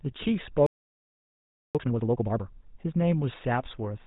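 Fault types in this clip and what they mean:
GSM full-rate codec: The whole clip carries the buzzy, gravelly roughness of the first GSM speech codec. It models the throat and mouth as a filter and drives it with a sparse train of pulses, so the speech loses its natural fine texture. The damage is plainly audible. Nothing comes through above about 4 kHz, which leaves the speech dull and boxy. The sound fits the 13 kbps full-rate mode.
Playback stall: At 0.66 s the speech stops dead in mid-flow and stays silent until 1.75 s, a gap of about 1.08 s. The player most likely ran short of incoming data, or its processing was held up, and it could not output anything until it recovered. When sound returns, it carries on rather than starting fresh.
Time-compressed catch-up: From 1.75 s to 2.83 s the speech runs at double speed but keeps its normal pitch. The player is clearing the backlog built up during the stall. 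It does this by cutting out small pieces of audio and cross-fading the remaining ones together. The speech therefore sounds hurried. Normal pacing resumes after 2.83 s.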